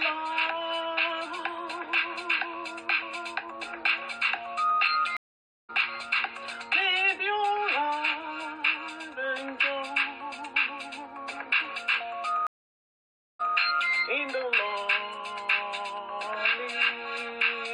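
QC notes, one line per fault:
5.17–5.70 s: Stream reconnect. The audio drops out for 0.52 s. It returns about half a second further on, so a short stretch is skipped. The link broke, and a fresh decoder picked up the live stream later.
12.47–13.56 s: Stream reconnect. The silence lasts 0.93 s. The audio resumes 163 ms earlier than where it stopped, so a brief stretch repeats. The server resent a burst after reconnecting.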